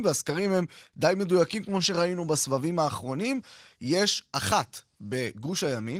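Nothing in this speech recording sounds faulty.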